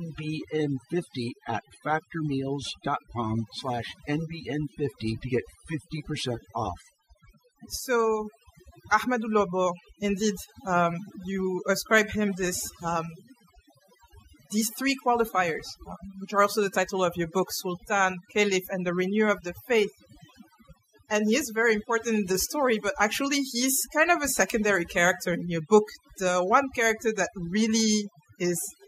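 Speech runs over a background that has dropped away and broken into twinkling, warbling specks for the whole clip, with quiet parts of the voice vanishing along with it. This is overdone noise removal: a noise reducer set too strong cuts individual frequency bands whenever they sit near its noise estimate.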